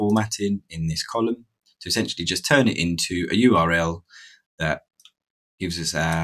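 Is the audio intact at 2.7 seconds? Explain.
No. At 2.7 seconds the sound pumps and thins: onsets come through, but sustained parts and decaying tails sink, with the level swinging by roughly 5 dB. This happens across the whole clip, not only at that moment. It is a noise suppressor applied to music or sounds. A speech-oriented suppressor was left active, mistaking steady tones and ambience for background noise and turning them down between attacks.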